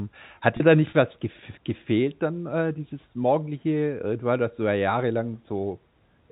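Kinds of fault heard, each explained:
Packet loss with pitch repetition: about 30 ms of speech, from 0.57 to 0.60 s, was lost in transit, which fits a single missing packet. The receiver bridged the gap by replaying the last pitch period over and over. Because the gap is shorter than the concealment fade, there is no dropout to silence. Instead there is a brief held, slightly buzzy sustain just before "dir da nicht was", within the 4 kHz band of the G.711 telephone line.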